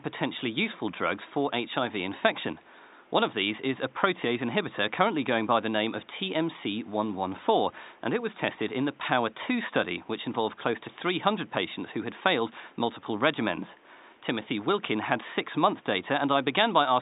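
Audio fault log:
No faults heard anywhere in this speech recording.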